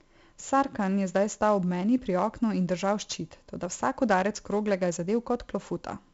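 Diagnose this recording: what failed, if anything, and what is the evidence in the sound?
The codec stage is where it went wrong. The whole recording carries 4-bit ADPCM compression, and heavily. Each sample is coded as a coarse 4-bit step from a prediction, so there's a gritty hiss riding on every loud stretch of speech, rising and falling with the level, plus roughness on sharp onsets where the step size can't adapt quickly enough. Nothing sits above about 7.7 kHz, which fits a 64 kbps stream at a reduced sample rate, hence the dull top end.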